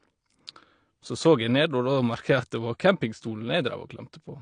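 Throughout, the speech is dull and smeared, with nothing above 9.8 kHz and a fizzy texture on sibilants, likely from AAC compression at a low bitrate near 32 kbps.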